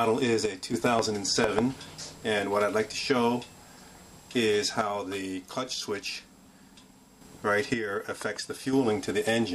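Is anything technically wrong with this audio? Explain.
Yes. One channel drops out three times: from 0.46 to 0.74 s, from 4.81 to 7.21 s, and from 7.74 to 8.73 s. Each time the sound abruptly falls by about 6 dB and then snaps back. The likely cause is the loss of one side of a stereo signal, so the mono sum keeps only half of the shared content. Anything carried only by the missing side vanishes until that channel returns.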